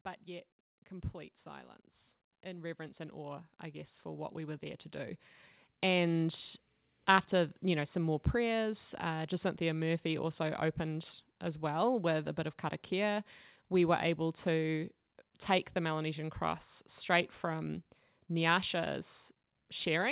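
From 0.25 s to 6.34 s there is automatic gain rising: the gain control treated the input as too quiet and pushed its gain up steadily, by about 15 dB, so the speech and the background noise swell together across those six seconds. The call path cuts everything above 4 kHz, which fits a G.711 narrowband link.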